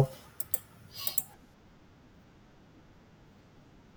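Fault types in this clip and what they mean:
Channel delay (comb filtering): one channel lags roughly two samples before the mono sum, cutting a fixed notch near 10 kHz, unlike a smooth low-pass roll-off.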